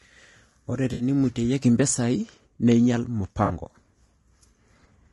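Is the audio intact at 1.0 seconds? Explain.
No. At 1.0 seconds the speech sits inside a dropout from 0.93 to 1.03 s. This is AAC frame loss with concealment. Compressed audio frames never arrived, so the decoder patched the gap from the last good spectrum, rebuilding energy and scrambling phase. About 60 ms of signal is missing, which fits roughly three lost frames. It sounds like a brief smeared, noisy, phasey blur where clean speech should be.

That moment also carries damage heard across the whole clip. The speech is rough and grainy, with noise filling the gaps between pitch harmonics and a top band that sounds thin and synthetic. This is most likely low-delay AAC compression, the AAC-ELD type used in video calls. Its very short frames resolve harmonics poorly. The plainly audible grain fits a low bitrate around 32 kbps.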